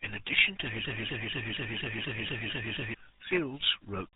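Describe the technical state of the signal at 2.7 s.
At 2.7 s the speech is stuck in a broken-record loop running from 0.85 s to 2.94 s, just after "addition to". A 239 ms fragment repeats nine times back to back, likely because the stream stalled and kept resending its last buffer. On the waveform, identical blocks recur every 0.24 s.

Over the whole clip, the RealAudio 14.4 codec at 8 kbit/s heavily damages the signal. It cuts everything above 3.9 kHz and leaves the sound muffled and gargly. A spectrogram shows a hard, empty ceiling near 3.9 kHz with smeared, blotchy energy below it.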